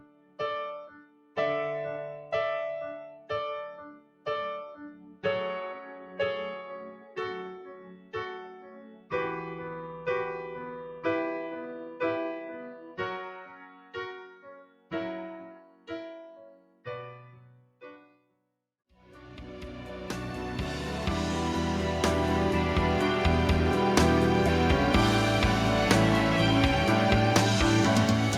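Throughout the clip the level pumps and thins: onsets come through, but anything held or decaying sinks away, with the level swinging by roughly 15 dB. This is a noise suppressor applied to music or sounds. The processor was built for speech and treats steady tones, ambience and reverberant tails as noise to be removed, so it pulls them down while letting sharp attacks pass. The result is a fluttering, hollowed-out sound with tails that end too early.

Five stretches are hit hardest, each heard as sound cut by the noise suppressor. From 0.00 to 1.37 s the sustained material sinks by up to about 17 dB for roughly a second. From 3.09 to 5.25 s it drops by up to about 17 dB for around one and a half seconds, and from 6.90 to 9.13 s by up to about 16 dB for a similar span. A brief dip of about 6 dB follows between 10.87 and 11.05 s. The longest loss runs from 11.69 to 18.93 s, with cuts of up to about 17 dB across some five seconds. 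In each stretch, steady or fading sound is mistaken for noise and clamped down, while sudden events mostly survive.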